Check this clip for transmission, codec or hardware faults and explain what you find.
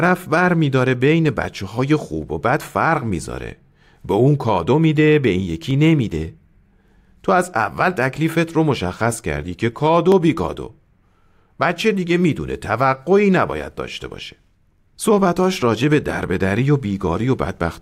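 Two brief clicks break the speech, at 5.71 s and 10.12 s. Dropped samples are the likely cause of both: under a millisecond of the stream goes missing, so the waveform leaps straight to a later value. Each loss is far too short to remove anything audible. Instead, the sudden step is heard as one sharp click.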